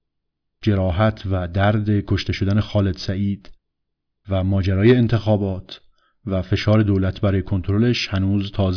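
No technical faults can be heard anywhere in the recording.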